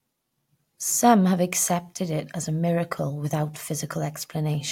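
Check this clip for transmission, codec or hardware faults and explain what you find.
Listening through the speech, nothing stands out as a fault, so there's nothing to flag here.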